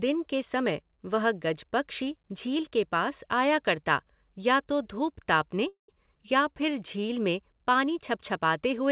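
Just after "या तो धूप तापने", at 5.68 s, the sound stops and resumes at 5.90 s. This is a call audio freeze. The likely cause is packets held up on the network, which left the jitter buffer empty. The receiver stretched the last sound into a short fading buzz or hiss. Then about 130 ms of silence follows. In all, roughly 0.2 s is inserted. Nothing is lost. The audio simply carries on later than before.

At 6.06 to 6.09 s comes a skip ahead. Audio was dropped, winning back some of that added delay, about 50 ms of it. Around 70 ms of sound is gone. The two sides are joined almost directly, with only a tiny fill. It is heard as a small jerk forward, with part of a sound clipped out.

From 6.42 to 7.02 s there is a jitter buffer slow-down, ending just before "में पानी". The buffer was running low or had just raised its target delay. To rebuild its reserve, the receiver repeated single pitch periods many times over. 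That adds 64 ms. Playback runs at 91% speed with unchanged pitch. Sounds are drawn out. All of this sits within the narrow telephone band of G.711 mu-law, with nothing above 4 kHz.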